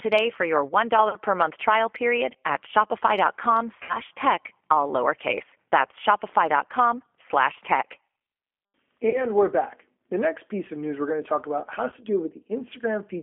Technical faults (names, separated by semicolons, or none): G.729 codec; VoIP packet loss concealed by the speech codec